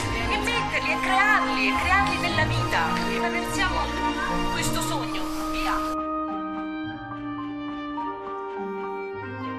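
No technical faults can be heard anywhere in this audio.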